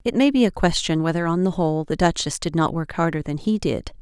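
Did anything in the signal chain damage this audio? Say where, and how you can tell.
No, nothing in this speech recording stood out on listening as damage from any stage of the signal chain.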